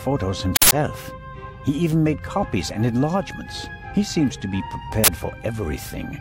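At 0.56 s an uninitialised buffer plays for 160 ms, until 0.72 s. The playback chain sent out a block before any audio had been written into it. Whatever stale data sat in that memory was read as samples. The result is a short, loud burst of harsh digital noise. It happens again at 5.04 s, this time lasting 40 ms, to 5.08 s. The shorter block gives a briefer burst.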